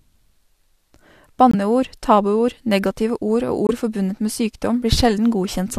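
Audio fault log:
1.51–1.55 s and 3.67–3.70 s, corrupt frame muted: the speech drops abruptly to silence for about 38 ms and 36 ms, with the first gap ending just before "tabuord negative". Each hole is the length of one compressed frame. Damaged bits made the decoder reject that frame, and the player filled its slot with silence rather than skipping it, so the surrounding speech keeps its original timing.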